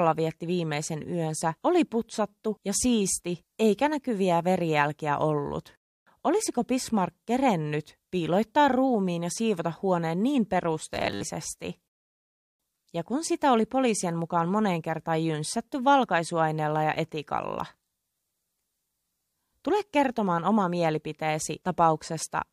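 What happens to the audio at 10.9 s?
Right after "ja siivota huoneen niin", from about 10.80 to 11.24 s, the speech collapses into robotic sound from repeated short buffers. You hear a stiff, metallic buzz pinned at 100 Hz, which fits a 10 ms chunk being replayed, and it still loosely tracks the speech. The likely cause is audio arriving too slowly, so the software loops its last scrap to fill the gaps and skips roughly half of the real signal.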